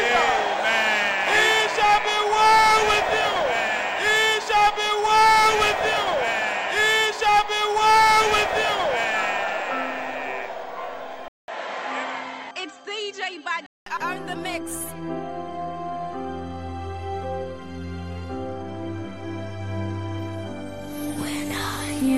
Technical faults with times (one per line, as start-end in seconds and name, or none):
11.28-13.86 input switched to a poorer device